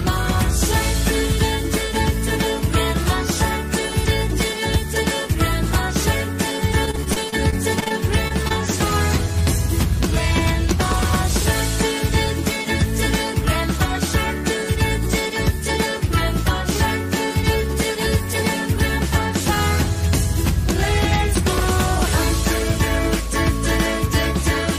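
From 6.85 to 7.92 s, repeated packet loss (robotic sound) chops the audio into a choppy stutter with pieces missing. Eleven gaps, the longest about 28 ms, are each patched by continuing the last sound. Unlike single dropouts, the holes follow closely enough to merge into one rough stretch. Then come two isolated short concealed packet losses, at 8.28–8.32 s and 8.48–8.52 s, each filling roughly 20 ms of missing audio. Each is a brief, separate smear or wobble rather than a sustained robotic texture.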